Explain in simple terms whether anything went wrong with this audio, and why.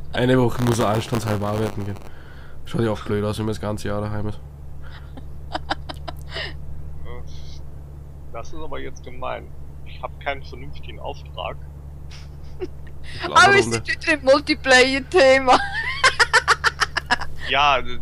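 From 0.56 to 2.07 s there's a robotic 100 Hz buzz. That's buffer tearing: each playback chunk abruptly splices in a small sliver of audio from a moment earlier.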